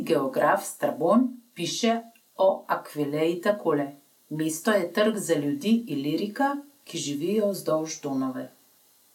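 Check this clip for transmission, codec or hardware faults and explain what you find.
No transmission, codec or hardware fault can be heard anywhere in the speech, and the signal stays steady and continuous throughout.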